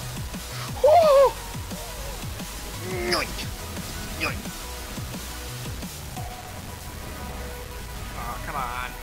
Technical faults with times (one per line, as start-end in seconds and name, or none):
0.00-9.03 low bit depth without dither